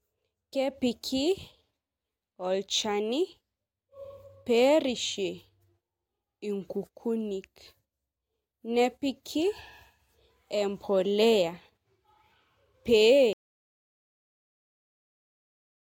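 At 13.33 s the speech cuts off mid-flow into an audio dropout to silence that runs right to the end, about 2.5 s of silence with no room tone at all. The input most likely got disconnected or muted while recording carried on.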